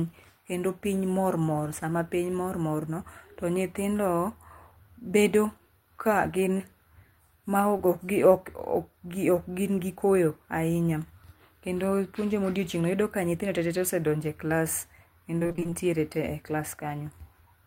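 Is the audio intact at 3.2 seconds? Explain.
Yes, at 3.2 seconds the speech plays through cleanly, with no dropout, click, distortion or other fault audible at that moment.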